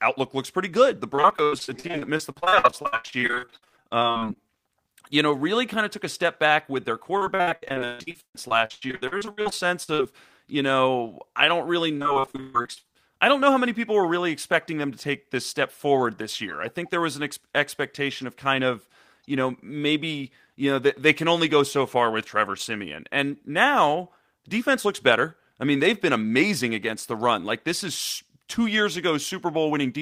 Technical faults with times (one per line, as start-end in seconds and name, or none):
1.15-4.37 repeated packet loss (robotic sound)
7.17-10.01 repeated packet loss (robotic sound)
11.97-12.90 repeated packet loss (robotic sound)